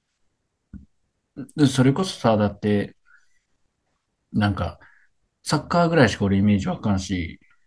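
Speech recording with no audible technical faults.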